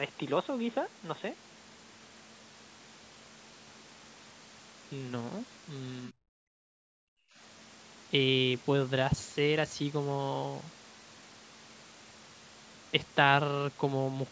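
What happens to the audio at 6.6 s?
At 6.6 s the background is gated by the echo canceller. From 6.54 to 7.37 s, while the far end's loudspeaker was playing, the canceller clamped the microphone, pulling the room sound down by as much as about 40 dB for roughly 0.7 s before releasing it. The ambience drops to near silence, then returns. On a waveform the noise floor collapses to a flat line, and a spectrogram shows a dark vertical gap across all frequencies.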